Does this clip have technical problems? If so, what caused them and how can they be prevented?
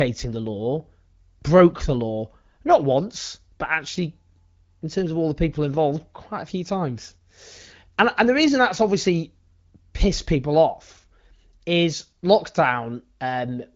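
Yes. From 0.12 s to 13.75 s the speech carries a faint, steady rattle of ticks, roughly every 70 ms, some two hundred in all. These are clock slip clicks, likely from two unsynchronised devices whose clocks differ by a few hundred ppm, forcing a single-sample drop or repeat each time the drift adds up to one sample. Locking both devices to a shared clock, or using proper asynchronous sample-rate conversion between them, prevents it.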